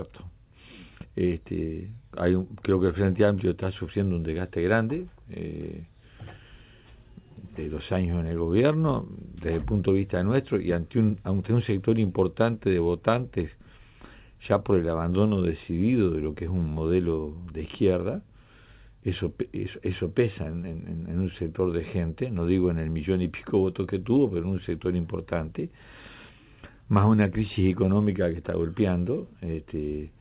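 No technical faults are audible.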